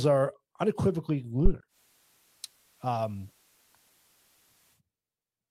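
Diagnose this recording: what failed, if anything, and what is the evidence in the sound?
Two things went wrong. First, a phantom power thump in the analogue input wiring: a short, deep bump from 1.46 to 1.51 s, dying away in about 13 ms. Supply voltage switched on or off on a live input, and that step punched straight through the coupling capacitors.

Second, the chain upstream of the recording, at the radio receiver: digital radio blending to analogue. At 1.68 s it cross-fades over about 105 ms to the FM feed. Level drops about 3 dB and hiss sits roughly 30 dB under the signal until it blends back at 4.82 s.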